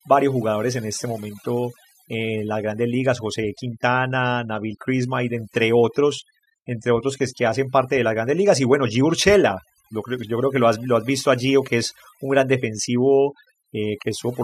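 Throughout the speech, overdone noise removal leaves near-silent gaps sprinkled with twinkling specks. Unlike a noise gate, which mutes everything at once, the suppression works band by band, so quiet parts of the voice vanish piecemeal.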